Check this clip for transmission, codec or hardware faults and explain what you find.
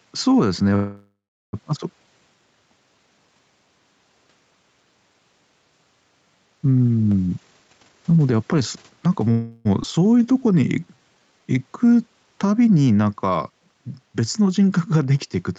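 Several faults are present in this speech, which passes through an Opus call path at 64 kbps with nothing above 8 kHz.

Gain pumping runs through the whole clip. The swing is about 10 dB. The likely cause is input gain set far too high, with a fast limiter pulling the level down on every peak. Loud and quiet parts sit close together. The speech sounds squashed and breathes with each phrase.

A call audio freeze occurs from 0.75 to 1.55 s. The last sound hangs on as a fading buzz, then goes silent for about 390 ms. Speech resumes where it stopped. The likely cause is delayed packets draining the jitter buffer. The receiver filled 776 ms with an invented tail, so nothing is lost. The clip is simply pushed later by that amount. A second, shorter freeze runs from 9.31 to 9.67 s. It fills 339 ms with a fading continuation and has no silent stretch.

A jitter buffer speed-up runs from 7.26 to 9.31 s. 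Speech plays at 137% speed while the pitch stays the same. It sounds hurried and clipped. The buffer held more audio than its target. The receiver cut out short pitch-period slices again and again to shed the excess. Around 0.7 s was removed in total. The phrasing feels rushed rather than higher in pitch.

A skip ahead happens at 9.83 to 9.86 s. Playback jumps forward with almost no gap. About a fifth of a second of speech is gone, and the two sides are butted together. A stretch of audio was dropped while later audio was already queued. The result is an abrupt splice, and the timing lurches forward.

A jitter buffer slow-down runs from 10.18 to 11.56 s. Speech plays at 88% speed at unchanged pitch. The buffer was running low, so the receiver repeated single pitch periods and bits of pauses to rebuild its reserve. That added 175 ms. Vowels sound drawn out. The pace feels sluggish just after the earlier rush.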